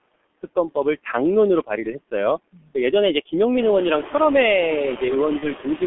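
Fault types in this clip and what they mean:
Noise suppressor artifacts: The background sinks away in the gaps between phrases and swells back under the speech, most noticeably after the room noise grows louder around 3.5 s. A suppressor is pulling noise-only bands down by about 21 dB, frame by frame.
G.723.1 codec: The speech sounds muffled and hoarse, with smeared consonants and nothing above 3.4 kHz. This is heavy damage from G.723.1 at 6.3 kbit/s, an early telephony codec that works in 30 ms frames within a 200 Hz to 3.4 kHz band and tracks the voice slowly.
VoIP packet loss concealed by the speech codec: From 5.39 to 5.45 s the speech collapses into a short stretched sound that fades out. One 30 ms frame was lost, and the decoder filled the gap by extending its last pitch and filter. The next frame still sounds off while the decoder recovers.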